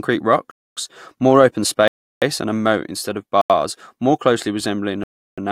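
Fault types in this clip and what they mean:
Block of digital silence, at 0.51–0.77 s, 1.88–2.22 s, 3.41–3.50 s and 5.04–5.38 s: the speech drops abruptly to silence and returns with no fade. The holes last 256 ms, 341 ms, 85 ms and 341 ms, long enough to be heard as gaps rather than ticks. Their tidy lengths suggest whole output buffers going unfilled in time, with the shortest matching a quarter of the longest.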